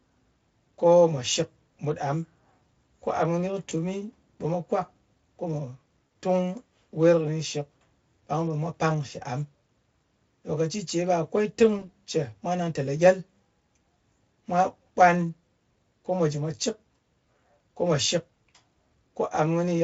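Around 3.69 to 3.72 s, again at 6.07 to 6.09 s, and once more from 11.79 to 11.90 s, you get VoIP packet loss concealed by the speech codec. Each gap sounds like roughly 20 ms of missing audio, about one codec frame. The Speex decoder papers over it by extending the last pitch and filter shape, so the speech briefly smears into a fading buzzy tone or coloured noise. The last one takes longer to recover.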